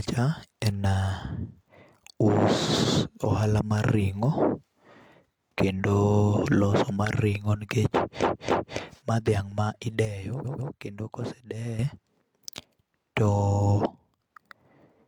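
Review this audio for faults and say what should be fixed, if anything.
At 8.18 to 8.73 s the speech stutters: a 0.28 s chunk plays twice more, a repeated frames fault that adds 0.56 s. At 10.41 to 10.68 s a shorter 0.14 s chunk repeats twice the same way. In both places a run of compressed frames was written or sent again, so the decoder replayed it.

From 10.05 to 11.79 s the speech and background noise drop together by about 9 dB. From 13.86 to 14.20 s they drop by about 7 dB. Each change is a sudden gain jump, likely from a gain setting applied without a ramp.

To prevent both, check that the encoder or transport never resends frames, and ramp every gain change over several milliseconds.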